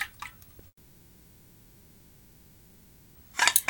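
Audio cuts out from 0.67 s to 3.18 s, roughly 2.5 s of near-silence after a brief fading tail, then resumes with that section missing: likely a long network dropout.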